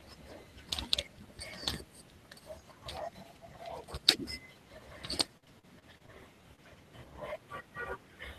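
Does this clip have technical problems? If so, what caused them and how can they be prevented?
Yes. From 5.37 to 6.10 s there is repeated packet loss, giving a robotic sound. Six gaps, the longest 48 ms, were patched by extending earlier speech. A steadier network with a larger jitter buffer prevents it.

Short concealed packet loss occurs at 6.56 s. About 20 ms went missing and was filled with continued sound, leaving a brief smear. Better network stability prevents it.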